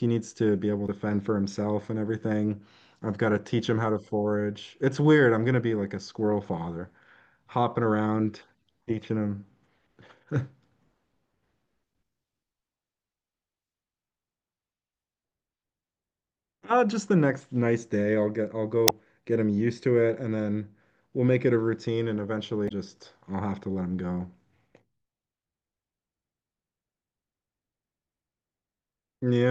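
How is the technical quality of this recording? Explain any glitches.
The speech recording has three short glitches, all damaged data in the compressed stream, at 0.85 to 0.89 s, 18.85 to 18.91 s and 22.65 to 22.72 s. Each is a brief blip: corrupted bytes made the decoder misread those frames and lose sync until it found the next valid frame header.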